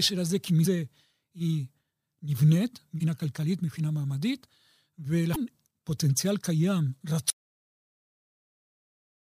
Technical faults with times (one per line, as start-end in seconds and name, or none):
0.62-0.66 damaged data in a compressed stream
2.97-3.01 damaged data in a compressed stream
5.32-5.36 damaged data in a compressed stream
7.30-9.34 audio dropout to silence